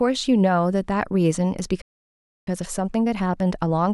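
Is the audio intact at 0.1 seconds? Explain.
Yes, at 0.1 seconds the speech plays through intact, with no dropout, click, distortion or other fault.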